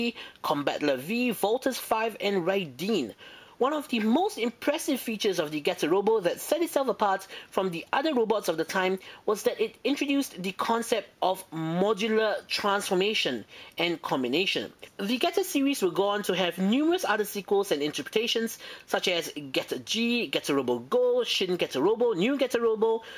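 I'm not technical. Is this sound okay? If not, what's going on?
Yes, nothing wrong with it.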